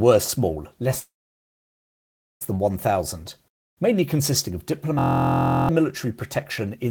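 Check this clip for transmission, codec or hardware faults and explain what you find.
The speech has two faults, a stall with a gap and a frozen buzzing loop.

From 0.99 to 2.43 s, just after "were small less", a short fading tail gives way to about 1.3 s of silence, and the speech then resumes intact. This is a call audio freeze, likely from delayed packets draining the jitter buffer.

From 4.99 to 5.69 s, between "mainly consisting of" and "military protection in the", a 43.1 Hz buzz replaces the speech. This is a system hang loop: one 23.22 ms slice, which fits a 1024-sample buffer, repeats 30 times, and roughly 0.7 s of speech is lost.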